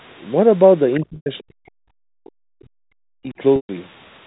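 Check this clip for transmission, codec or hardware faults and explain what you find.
Three kinds of fault are audible in the speech: a brief echo leak, a long stretch of double-talk suppression, and two packet-loss gaps concealed by pitch repetition.

From 0.93 to 0.97 s, the other side's voice leaks through as a faint scrap about 20 dB under the talker. The likely cause is an echo canceller leaving some loudspeaker sound in the microphone signal. Unlike the suppression that follows, it adds a second voice rather than removing the talker's.

From 1.0 to 3.39 s, the speech is suppressed in double talk. For roughly two seconds the talker dips, by as much as about 40 dB at its deepest, likely because the canceller could not tell near speech from echo and attenuated both. It differs from packet loss because the level pumps unevenly rather than breaking into a held tone.

Packet loss with pitch repetition occurs at 1.16 to 1.26 s, about 100 ms, and at 3.56 to 3.69 s, about 130 ms. 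The receiver repeats the last pitch period, giving a brief buzzy hold that fades to silence before speech cross-fades back. That hold-then-fade pattern sets it apart from the uneven dipping of suppression.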